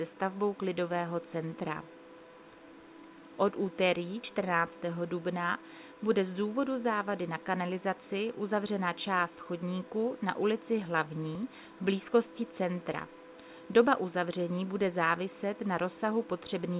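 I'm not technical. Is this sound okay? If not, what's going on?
Yes, nothing is wrong here: it went through an ordinary phone-call link whose G.711 mu-law codec keeps nothing above 4 kHz, so it sounds like a normal phone line, which is expected.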